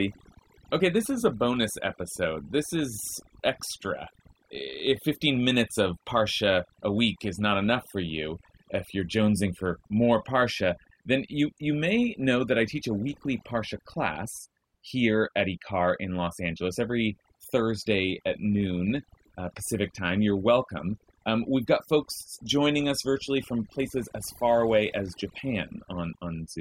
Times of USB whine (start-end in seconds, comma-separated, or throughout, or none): none